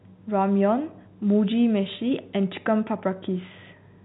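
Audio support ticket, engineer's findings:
No audio faults found.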